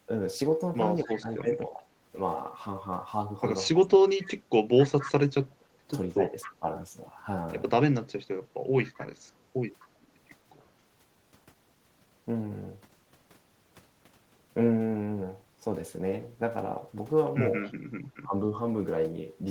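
At 1.04 to 1.82 s the voice dips by about 20 dB in patches, with a faint echo leak from 1.07 to 1.15 s trailing 256 ms behind at roughly 20 dB below the speech. The dips are speech suppressed in double talk, likely an echo canceller turning both its own talker and the loudspeaker echo down when it could not separate the near talker from the returning far-end sound. From 3.71 to 6.65 s the dips run deepest, about 25 dB, affecting about a second of the voice. Inside that stretch, from 4.22 to 6.54 s, the strongest leak carries a copy of the speech at about 15 dB down, likely left uncancelled after loudspeaker pickup. A weaker echo leak from 8.94 to 9.87 s sits near 30 dB down, with a brief dip of about 15 dB at 9.30 to 9.35 s. The quietest leak, at 17.67 to 17.72 s, is about 35 dB down, and a final suppression from 17.94 to 18.34 s loses about 15 dB. Suppression removes level from the talker's own voice and leaves no added copy. 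Echo leak adds a second copy that always lags by the same 256 ms, which sets it apart from room reverberation, whose tail has no fixed delay.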